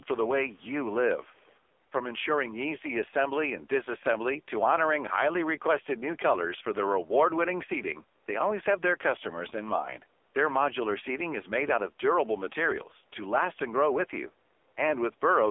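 Speech, carried through an AMR narrowband mobile codec for the whole clip, with heavy codec damage: nothing above 3.6 kHz survives, the line band sits at roughly 300 Hz to 3.5 kHz, and the buzzy, synthetic quality fits AMR-NB's low 5.9 kbps mode, where few pulses drive the vocal tract model. The bass roll-off is the call microphone processing's normal high-pass filter. From 0.89 to 0.94 s an echo leak appears, a brief delayed copy of the voice about 230 ms behind and around 30 dB below the speech, likely from one side's echo canceller letting loudspeaker pickup through.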